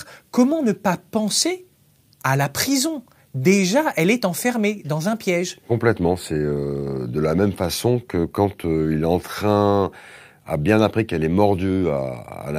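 No technical faults can be heard anywhere in the audio.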